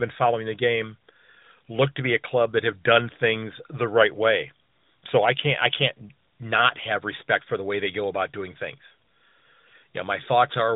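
Nothing stood out on listening to this speech recording.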